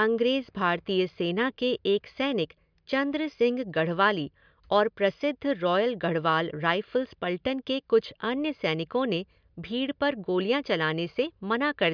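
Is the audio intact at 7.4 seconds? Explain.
Yes, the audio is intact at 7.4 seconds, with no dropout, click, distortion or other technical fault at that point in the speech.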